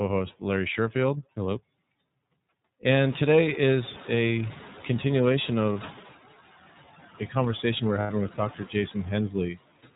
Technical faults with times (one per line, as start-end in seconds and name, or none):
0.00-9.96 noise suppressor artifacts
0.00-9.96 iLBC codec
3.04-5.98 noise suppressor catching up
5.72-5.76 lost iLBC frames
8.01-8.10 lost iLBC frames
8.56-8.74 speech cut by the noise suppressor